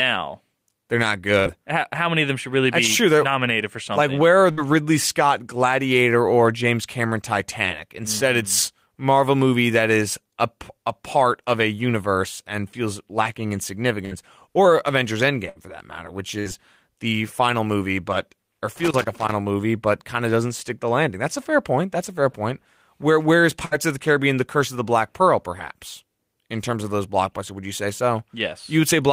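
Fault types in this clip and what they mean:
Burst of packet loss: Brief held buzzes or fading hisses, each about 90 ms, at 1.39, 4.51, 14.05, 15.49, 16.39 and 23.65 s. After each one, playback jumps ahead. Lost audio packets were covered by about 60 ms of the last sound, stretched and faded, and about 60 ms of the sound never arrives.
Loose connector crackle: An irregular burst of scratchy crackle from 18.76 to 19.32 s, just over half a second. A worn or dirty contact rapidly made and broke the connection, chopping the signal on and off.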